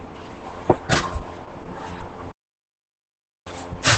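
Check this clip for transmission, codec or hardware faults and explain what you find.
There is one codec fault, Opus voice compression, and it runs through the whole clip. The speech has no content above about 8.5 kHz. That matches the wideband limit of Opus's SILK speech coder. SILK models the voice with linear prediction and codes the excitation very coarsely. The damage is heavy. The voice sounds muffled, hoarse and slightly robotic. This points to a low bitrate, around 10 kbps.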